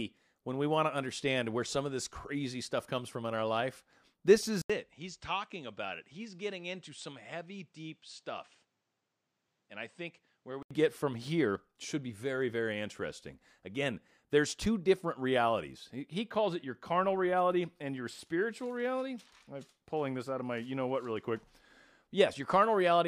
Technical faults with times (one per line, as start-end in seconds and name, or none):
4.62-10.71 input switched to a poorer device